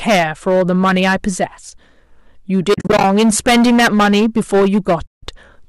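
Speech in this clip is hard clipped throughout. The signal is driven about 16 dB past what the chain can pass, so the peaks of a sizeable share of the waveform, roughly one sample in seven, are sliced flat. That gives a harsh, buzzing fuzz on every loud syllable rather than the occasional crackle of mild overload. It is broadband distortion that rises and falls with level, which separates it from the grainy, between-harmonic noise of low-delay AAC coding, a path that is likely present here but only lightly coloring the sound. AAC frame loss with muting opens two holes. From 2.74 to 3.04 s, about 170 ms of sound is zeroed in short bursts scattered over roughly 300 ms, the longest gap only about 40 ms. From 5.06 to 5.23 s there is a single near-continuous gap of about 170 ms. The pattern fits frames of roughly 10 ms each. Because the decoder's overlapping windows fade the sound out and back in, the gaps have soft edges, unlike an abrupt dropout.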